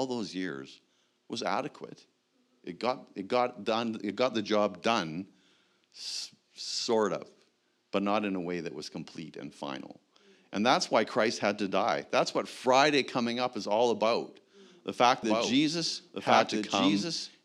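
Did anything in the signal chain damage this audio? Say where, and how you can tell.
Yes: a doubled audio track cuts in at 15.23 s, a dry copy about 5 dB down trailing about 1.5 s, likely from a slower second capture path or an out-of-step edit.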